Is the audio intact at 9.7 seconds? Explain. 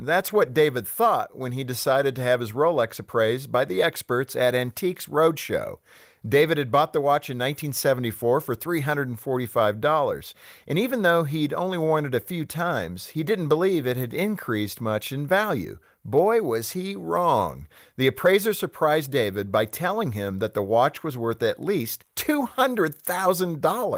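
Yes, the speech at 9.7 seconds is intact, with no fault at that moment.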